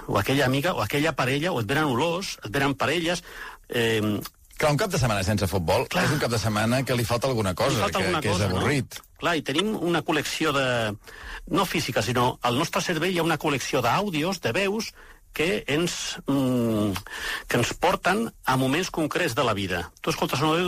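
Two brief bursts at 8.50–8.52 s and 9.56–9.61 s, the second louder, are corrupt frames decoded: damaged compressed data spanning a couple of frames each, played with misplaced spectral energy.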